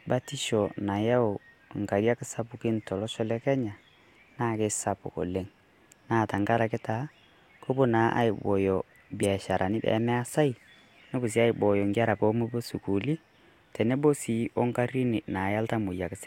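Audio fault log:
9.22 to 9.25 s, corrupt frame decoded: damaged bits in a couple of compressed frames were decoded anyway, so energy lands at wrong frequencies as a brief burst peaking near -15 dBFS, replacing about 20 ms of sound. Unlike a dropout or concealed packet loss, there is no smooth fill.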